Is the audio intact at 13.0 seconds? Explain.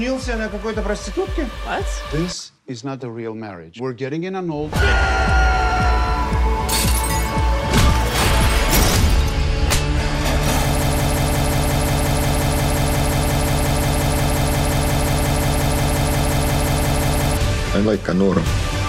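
No. At 13.0 s the audio is caught in a broken-record loop running from 10.82 to 17.37 s. A piece about 177 ms long repeats exactly, back to back, 37 times, likely because the playback or stream stalled and kept resending its last fragment. Unlike a stutter or dropout, the repeats are identical and the missing material never returns.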